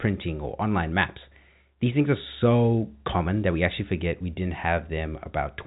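Speech carried over G.711 telephone coding, band-limited to 4 kHz with only the faint level-following quantisation noise that format always carries, and no technical faults to report.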